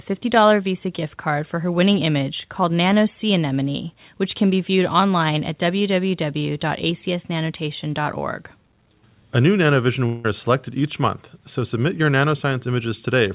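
From 10.06 to 10.26 s there is what is most likely a long network dropout: the packets stopped arriving, and the receiver filled roughly 180 ms by stretching the last sound it had into a buzz or hiss that fades, never reaching silence. That same 180 ms of speech is lost for good, so the talker resumes at 10.26 s with a piece missing. The concealment sits within the call path's G.711 A-law sound, which carries nothing above 4 kHz.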